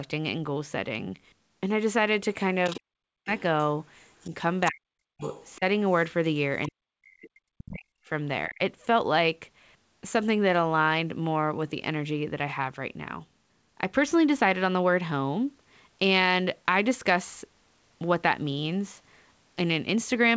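From 2.64 to 3.42 s the other side's voice leaks through at roughly 15 dB below the talker, a faint second voice most likely left behind by an echo canceller that did not fully remove the loudspeaker signal. On a spectrogram it shows as weak harmonic traces under the main speech. Inside that span, from 3.01 to 3.31 s, the talker's speech is suppressed in double talk. The level falls by up to about 40 dB, the likely result of the canceller turning everything down while both sides spoke. This appears as a sudden notch in the waveform envelope.

Faint leakage returns at 4.02 to 4.30 s, about 30 dB down, followed by a longer suppression from 4.31 to 5.64 s. That suppression covers about half a second in pieces, so the speech cuts in and out, with dark vertical gaps on the spectrogram. A further scrap of leakage, about 25 dB down, sits at 5.20 to 5.59 s within it.

At 6.63 to 6.69 s a brief burst of the other side, about 20 dB down, comes just before the heaviest suppression, from 6.69 to 8.60 s. 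About 1.5 s of speech is dipped or lost there, and the waveform thins to near-silent patches.

Throughout the clip the band stops at 8 kHz, which fits a wideband call codec such as G.722.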